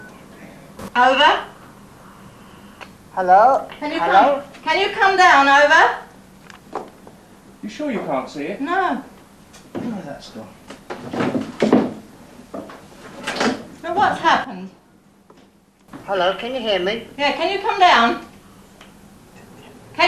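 Two sudden gain jumps in this audio: at 0.79 s the level leaps up by about 12 dB until 0.88 s, and from 14.44 to 15.88 s it drops by about 10 dB, background noise shifting with it. That's likely a digital gain step applied without a ramp.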